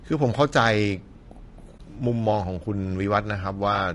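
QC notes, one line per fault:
throughout: low-delay AAC compression. The speech sounds rough and grainy, with a noisy haze filling the gaps between pitch harmonics and a thin, somewhat artificial top band. Coarse quantization at a low bitrate leaves noise between the harmonics, which is likely the cause, and the plainly audible damage fits a bitrate around 32 kbps. On a spectrogram, harmonic lines look smeared and speckled, the spaces between them are filled with noise, and the upper band is blotchy and patchy.
1.77–1.80 s: AAC frame loss with muting. The sound drops into a brief, soft-edged dip of about 20 ms, consistent with a single lost frame. The decoder zeroed that frame's spectrum, and the overlapping windows faded the signal down and back up, which softened both edges. On the waveform the envelope tapers smoothly down and recovers. On a spectrogram a narrow vertical gap runs through every frequency band.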